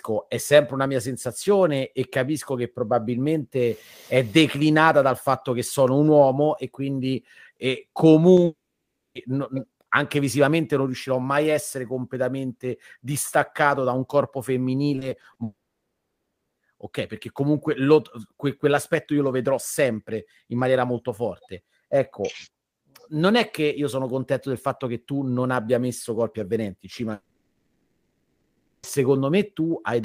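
At 8.35 s a short concealed packet loss leaves a brief smear of about 20 ms. The receiver bridged the missing audio by extending the preceding sound and blending back. Unlike a dropout, nothing goes quiet and the flow continues almost intact.

From 8.45 to 9.17 s comes a long network dropout, likely from audio failing to arrive. About 700 ms is lost: the last sound trails off and roughly 610 ms of silence follows before the sound resumes further on, with the lost part gone.

Between 14.95 and 15.37 s, repeated packet loss gives a choppy, robotic texture. Five separate gaps, none longer than 20 ms, are each patched in turn, so about a quarter of that stretch is filled-in sound. The tiny holes recur rather than forming one silence.

A second long network dropout runs from 15.43 to 16.59 s, likely another stall in delivery. About 1.14 s is missing and roughly 1.04 s of it is silent after a brief fading tail.

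The third, from 27.13 to 28.85 s, also likely comes from audio not arriving. It loses about 1.7 s, and about 0.84 s of that is silence after a long decaying continuation.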